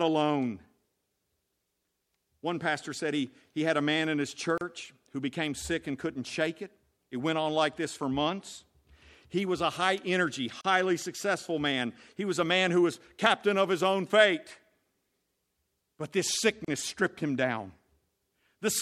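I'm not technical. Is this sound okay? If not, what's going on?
No. The speech has three brief dropouts, each a gap at a join of encoded pieces. They fall at 4.58 s, after "a man in his", at 10.61 s, after "was a high energy", and at 16.65 s, just before "stripped him down". Each silence lasts about 33 to 34 milliseconds, and they recur every 6 seconds. The audio was saved in separate chunks and stuck back together. Each chunk kept a sliver of silence at its edge, so the sound briefly cuts out, then resumes.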